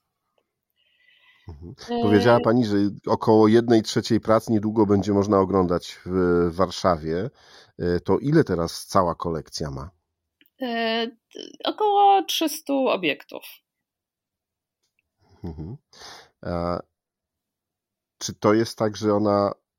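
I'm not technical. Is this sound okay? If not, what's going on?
Yes, this recording sounds fine, with nothing wrong to point out. It's a speech clip, and no technical problems can be heard anywhere in it.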